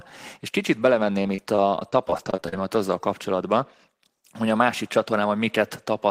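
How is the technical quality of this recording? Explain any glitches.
The recording is marred by repeated packet loss (robotic sound) from 1.12 to 2.53 s. Over this stretch the stream kept dropping or delaying data, and each hole was patched by stretching out the last received sound before the next hole arrived. The pattern suggests around eighteen short gaps, the longest about 37 ms, with roughly a fifth of the passage filled in this way. The speech turns choppy, with small pieces missing.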